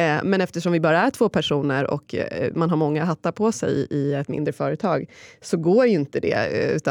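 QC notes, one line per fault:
No faults found.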